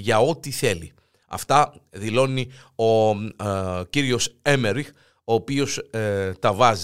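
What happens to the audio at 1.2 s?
Nothing goes wrong at 1.2 s; the speech carries on intact through that moment, with no dropout, click or distortion.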